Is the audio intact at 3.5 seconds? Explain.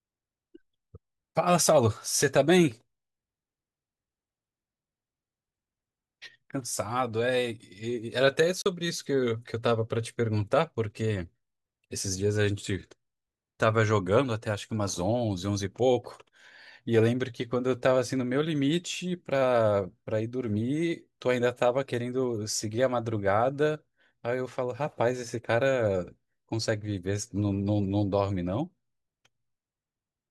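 Yes, at 3.5 seconds the speech plays through without any audible fault.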